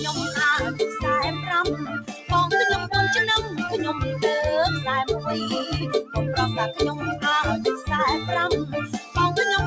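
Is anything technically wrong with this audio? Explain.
Yes. A speech-style noise suppressor was left running on this sound for the whole clip. It treats steady tones, ambience and decaying tails as noise and pulls them down, while sharp onsets pass through. The gain therefore swings by around 10 dB, so the sound pumps and thins. On a waveform the envelope breathes unevenly. On a spectrogram the sustained energy looks patchy and smeared between bright transients.

Three passages are cut harder than the rest by the noise suppressor: 1.78 to 2.3 s, falling by about 12 dB; 6.94 to 7.24 s, by about 8 dB; and 8.65 to 9.16 s, by about 9 dB. Held parts and tails sink, so decays end early. These show as sudden dips in the waveform and darkened gaps on the spectrogram.

The sound also passed through a call path whose band stops at 8 kHz, which fits a G.722 wideband codec at 64 kbps. That appears as a clean ceiling on the spectrogram.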